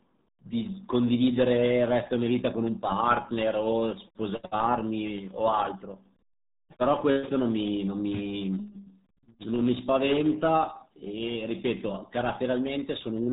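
RealAudio 14.4 codec damage runs throughout: heavy low-bitrate compression, consistent with roughly 8 kbit/s, removes everything above 3.8 kHz, leaving the speech muffled and gargly.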